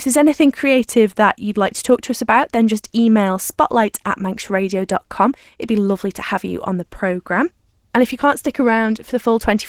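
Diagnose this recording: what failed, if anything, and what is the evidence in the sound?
Opus voice compression throughout, a codec-stage fault: plainly audible coarse coding of the speech, while content still reaches about 20.2 kHz. This points to Opus at a low rate, around 16 kbps, in hybrid mode, with SILK's roughly quantised excitation below 8 kHz and CELT above.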